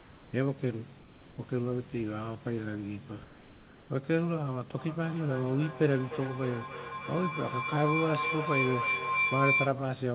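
Comfort noise in place of the background appears from 0 to 0.33 s, 0.99 to 1.38 s and 3.24 to 3.9 s. In these pauses the real room background, which sits about 25 dB below the loud parts, gives way to a flat, detail-free hiss about 3 dB quieter. The likely cause is discontinuous transmission: the sender goes silent when no speech is detected, and the receiver fills the gap with synthetic noise.

Feedback howl runs from 4.78 to 9.83 s. Two devices in the same room on the call form a loop from microphone to loudspeaker and back, gaining level on each trip. The repeats narrow to a tone near 2 kHz that pulses roughly every 0.3 s, the loop's delay, and swells until it reaches about the level of the speech before it stops.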